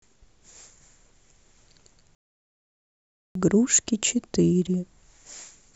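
A speech recording with one playback stall. At 2.15 s the sound cuts out mid-flow and the output goes fully silent. Nothing is heard until 3.35 s, a gap of about 1.2 s, and then the speech carries on. The likely cause is the player running short of data, or its playback thread being blocked, so that nothing reached the output until it recovered.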